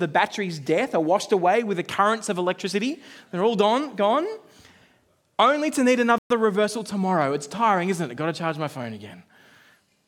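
At 6.18 s, just after "only to need", the speech cuts to silence. The gap lasts about 0.12 s. It resumes with "reversal tomorrow". This is likely a Bluetooth stall. Interference delayed packets, so the headphones' buffer emptied and playback paused until resent data arrived.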